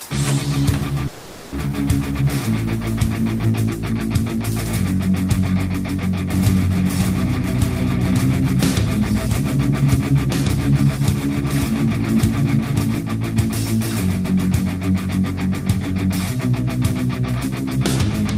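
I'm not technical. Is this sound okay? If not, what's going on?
No. There are two problems.

From 1.07 to 1.54 s there is a long network dropout. The sound likely stopped arriving for a moment. The player filled the gap with a fading buzz. When the sound returns, about 0.4 seconds of it is simply gone.

From 6.30 to 13.00 s there is a doubled audio track. A second copy of the sound plays about one and a half seconds behind, a little quieter. It likely comes from recording the sound twice. The copy starts and stops suddenly.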